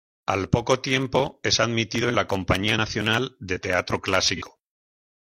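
At 4.36 to 4.42 s, about 43 ms of the speech turns into a brief smeared, noisy patch. This is AAC frame loss with concealment, and the length fits a single lost frame. The decoder rebuilt it from the previous spectrum, which sets it apart from a plain dropout's silence or click.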